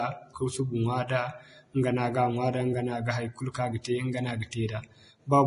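Vorbis compression runs throughout this speech clip: nothing above 10.5 kHz, and the remaining treble turns hissy and grainy, likely from heavy quantisation at a low bitrate around 28 kbps.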